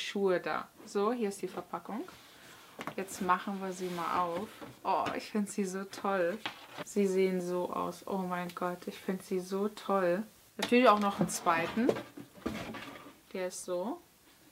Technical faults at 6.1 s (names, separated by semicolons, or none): none